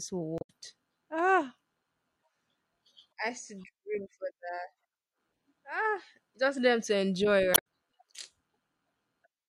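A short glitch breaks into the speech from 0.38 to 0.50 s, and a second, briefer blip follows just after "just them to enjoy", from 7.51 to 7.61 s. Both are damaged data in a compressed stream: bytes in those stretches were lost or overwritten, so the decoder misread the affected frames, lost sync, and produced garbage until it locked onto the next valid frame header.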